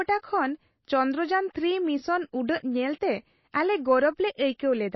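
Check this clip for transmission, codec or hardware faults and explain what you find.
Two faults are audible in this speech clip.

The whole clip has plainly audible MP3 compression damage, likely from a low-bitrate MP3 encode. Nothing is heard above about 5.8 kHz, so the treble is cut off sharply. The encoder runs short of bits and drops weak frequency lines. Those lines switch on and off between frames. The result is a watery, swirly texture with metallic chirps on s sounds. The dullness and artefacts fit a bitrate near 24 kbps.

At 2.47 s there is pre-echo, just before "ᱧᱮᱞᱛᱮ ᱟᱞᱮ". A transform codec spreads its quantisation noise across a whole block. Here a sharp attack sits late in its block. The noise sized for that loud onset also fills the quiet gap before it. This is heard as a brief hiss lasting about 18 ms. The attack itself sounds soft and smeared.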